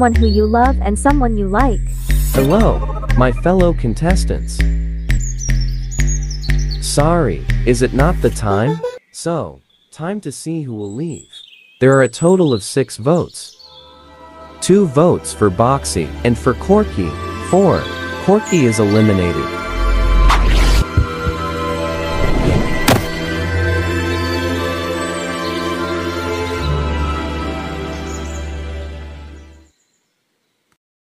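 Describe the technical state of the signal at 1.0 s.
At 0.96 s, compressed frames are skipped. About two frames of the compressed audio never play, either missing or rejected by the decoder as damaged. The sound jumps ahead by about 50 ms, which fits a frame length near 26 ms.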